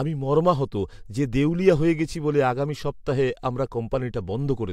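No technical faults can be heard in this recording.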